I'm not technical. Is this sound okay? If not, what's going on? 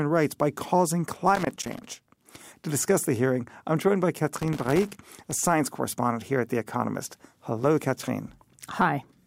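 No. There is loose connector crackle from 1.35 to 2.20 s and 4.36 to 5.33 s. A worn plug contact flickers on and off, scratching up the speech.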